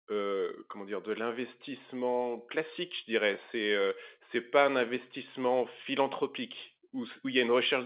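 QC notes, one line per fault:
Nothing to flag here, as the speech sits comfortably within its telephone-grade mu-law coding with no problems turning up along the way.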